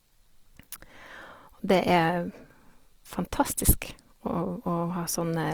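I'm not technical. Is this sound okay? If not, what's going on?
No. All the way through, the speech has a rough, grainy, hissy texture, most likely caused by Opus compression squeezing the audio into very little data. The treble still extends to the top of the range, so it doesn't sound muffled. What sets it apart from MP3 damage is that it has much less of the watery, swirling warble. Instead, gaps get filled with a sandy noise, so clear tones turn fuzzy and coarse.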